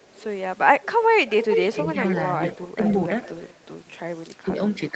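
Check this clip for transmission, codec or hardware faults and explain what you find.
Two faults are present: a recurring echo leak and brief speech suppression during double talk.

Echo leak, at 0.03–0.24 s, 0.82–0.91 s, 1.26–2.21 s, 2.48–2.95 s and 3.22–3.64 s. The far end's echo canceller likely failed to remove what its microphone picked up from the loudspeaker, so the speech returns delayed by about 0.45 s. It is faint at first, becomes strong around 1.3–2.2 s at only about 5 dB below the direct speech, then fades again.

Speech suppressed in double talk, at 2.72–2.79 s and 4.45–4.53 s. While both ends are active, the echo canceller likely mistakes the talker for echo and turns it down. Each time the speech dips for about 70 ms, by roughly 10 dB at the first point and 5 dB at the second. The result is a short dip, with the first one falling inside the echo stretch at 2.48–2.95 s.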